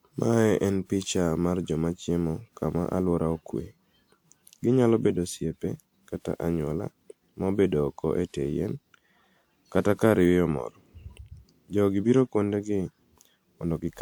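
Generation loss runs through the whole clip, from start to finish. The speech has a swirly, smeared quality with a hollow core, and consonant attacks are blurred. The sound points to a lossy codec (something like WMA 1 at 128 kbit/s) likely decoded and re-encoded around seven times. Each pass requantised on a shifted frame grid, so noise and spectral gaps piled up. The bandwidth still reaches about 20.1 kHz, yet the sound is more degraded than that rate alone would leave it.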